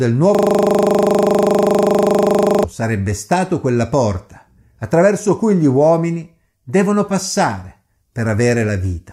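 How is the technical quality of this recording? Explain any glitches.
The recording has one glitch. System hang loop, 0.35 to 2.64 s: the system froze while the hardware kept replaying one 40 ms buffer, making a rigid 25 Hz buzz before "sarebbe stato quella porta".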